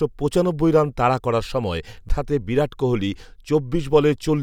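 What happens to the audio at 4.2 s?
At 4.2 s the speech carries on intact, with no dropout, click, distortion or other technical fault at that moment.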